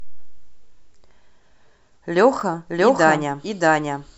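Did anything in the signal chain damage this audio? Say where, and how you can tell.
Yes. Around 2.40 to 2.42 s there's a garbled blip: chunks out of order, with a 10 ms block landing one slot late, so the driver or buffer stage wrote it out of sequence.

From 2.70 s to the end there's a doubled audio track: a dry, full-band copy at about the same level, roughly 0.7 s behind, which likely comes from a second, slower capture path.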